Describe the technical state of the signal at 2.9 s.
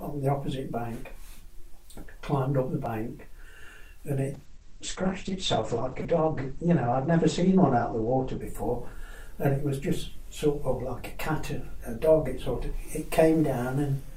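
At 2.85 s there's a repeated buffer: fresh audio didn't arrive in time, so the device replayed its last block once more, roughly 5 ms long, which fits a 256-sample buffer. With a block that short, the hard joins come across as a quick click rather than a stutter.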